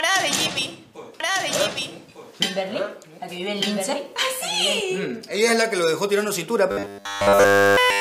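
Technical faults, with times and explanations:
1.20–4.80 s, doubled audio track: A second copy of the same audio is mixed in, likely because it is captured again through a slower path running alongside the first. That copy trails the original by about a second and sits roughly 5 dB lower, carrying the full frequency range with no decay or room colour. The result is a distinct, clean repeat of everything heard a second earlier, starting and stopping abruptly at both edges.
6.71–8.00 s, robotic sound from repeated short buffers: Fresh audio stops arriving in time, and the playback side fills each gap by replaying the last short buffer instead of new material, likely a sign of a starved stream. All of this stretch is repeats. The loops impose a fixed 100 Hz pitch, which fits a 10 ms buffer, turning the sound into a rigid metallic buzz that only loosely tracks the underlying audio until the clip ends.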